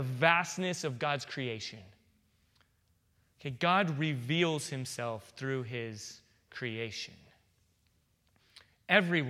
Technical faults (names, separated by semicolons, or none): none